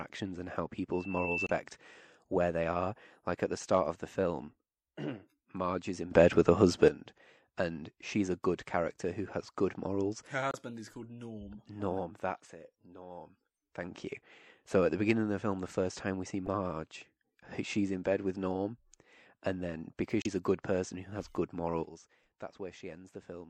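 Throughout, the speech sounds watery and swirly, with smeared consonants, likely from MP3 compression at a low bitrate, which fits around 64 kbps.

From 0.93 to 1.62 s a pure tone near 2.7 kHz swells within about 0.4 s to roughly the level of the speech. This is loudspeaker feedback squeal, where the microphone re-amplifies its own loudspeaker until one frequency runs away.

Inside that squeal, from 1.45 to 1.50 s, a short glitch marks damaged data in a compressed stream. The decoder misreads corrupted frames and loses sync.

From 6.11 to 6.88 s, speech and background noise jump up together by about 12 dB and then drop back, likely a sudden gain jump applied without a ramp.

Within that louder stretch, at 6.34 s, a brief glitch shows more damaged data in the compressed stream. Similar glitches occur from 10.51 to 10.55 s, from 16.46 to 16.48 s, and from 20.21 to 20.26 s, each a corrupted stretch where the decoder loses its place.

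From 21.84 s to the end, everything falls by about 12 dB at once, another sudden gain jump, again likely a level change with no fade.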